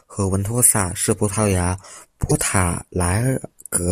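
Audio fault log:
2.29 to 2.32 s, broken MP3 bit reservoir: right after "是葡萄牙" the speech skips forward and a brief glitch fills about 30 ms, roughly one frame, which fits frames of about 26 ms. The likely cause is lost MP3 frames. The next frame, which borrows part of its data from earlier frames, reads misplaced bytes instead of its own and decodes them wrongly before clean frames resume.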